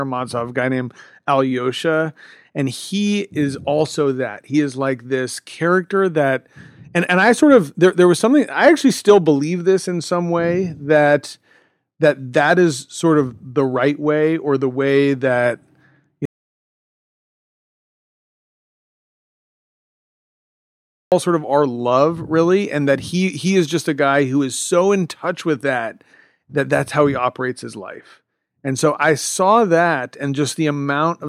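At 16.25 s the input feeding the recorder was most likely lost, whether through a dropped connection, a failed link or an accidental mute, while the encoder kept writing silence. The result is an audio dropout to silence: the speech cuts off abruptly and the track falls to silence, with no room tone underneath, until 21.12 s, when sound resumes mid-flow. Nearly 4.9 s of speech is simply missing.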